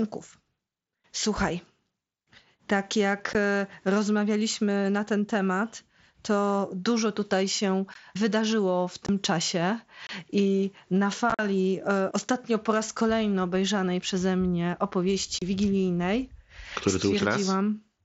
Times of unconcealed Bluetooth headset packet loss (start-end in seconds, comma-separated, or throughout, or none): 3.33, 7.94, 9.06-9.09, 10.07-10.09, 11.30-11.39, 15.39-15.42